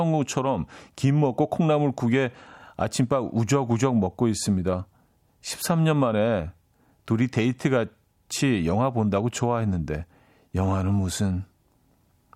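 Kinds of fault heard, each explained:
Nothing stood out on listening to the speech.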